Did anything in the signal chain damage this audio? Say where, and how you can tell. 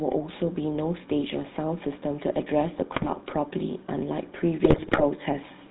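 Yes. The whole clip went through the GSM full-rate codec: nothing comes through above 4 kHz, and the speech has that buzzy, gravelly roughness, which fits a 13 kbps link. The codec rebuilds speech from a vocal-tract filter driven by coarse, regularly spaced pulses.

There are also GSM bit errors from the radio link, at 2.92 to 3.10 s and 4.64 to 5.03 s, where the speech breaks into squawks and gargling. Corrupted bits reached the decoder, so bad filter, pitch or gain values bent the spectrum and level frame by frame.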